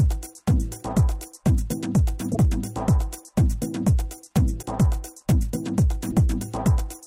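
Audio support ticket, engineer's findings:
Broken MP3 bit reservoir, likely: short glitches at 2.34–2.37 s, 4.61–4.64 s and 6.10–6.13 s, each about 30 ms, with the audio jumping ahead. Each glitch lasts roughly one frame, consistent with a 26.1 ms MP3 frame. Frames were probably cut out, so the next frame reached back into the reservoir and read another frame's bytes instead of its own data.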